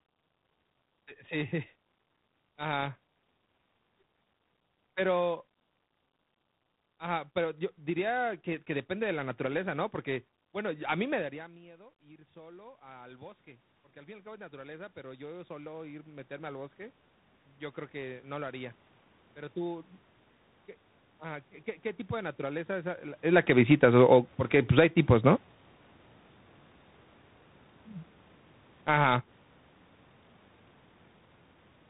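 The clip is speech, carried through tandem speech coding for its whole length. It sounds rough and muffled, which fits a path through CVSD, then G.711 mu-law, then G.726 at 32 kbit/s. That chain decoded and re-encoded the speech at each border, so each coder worked on the previous one's damage. On a spectrogram, nothing reaches above 3.8 kHz, leaving a flat ceiling, and the harmonics below it look smeared and grainy.

Automatic gain rising runs from 10.61 to 16.77 s. The talker moves away at about 11 s and the input drops by about 24 dB. The gain control then climbs about 18 dB over roughly six seconds, so voice and room noise swell back together. The waveform envelope shows a sudden shrink followed by a slow ramp upward, with the noise floor between phrases rising in step.

Automatic gain falling appears from 23.2 to 25.04 s, just after "de naturaleza es a", as the talker comes closer around 23 s. 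The gain eases down about 6 dB, and the loud onset sinks together with its background. A shorter drop of about 8 dB follows from 28.74 to 29.1 s. An automatic gain rise of about 7 dB overlaps it from 29.01 to 29.47 s, so the waveform dips and recovers within under a second.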